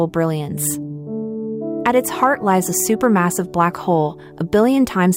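No technical faults can be heard at any point in the audio.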